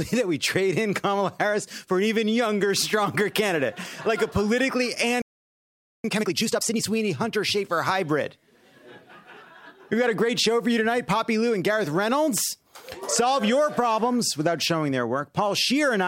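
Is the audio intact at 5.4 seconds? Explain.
No. At 5.4 seconds the audio is inside a playback stall running from 5.22 to 6.04 s. The sound stops abruptly in mid-flow and the output goes silent for about 0.82 s. It then picks up again. The likely cause is that the player ran out of buffered data, or its playback thread was blocked, so nothing reached the output until it recovered. At 5.4 seconds you hear only that gap.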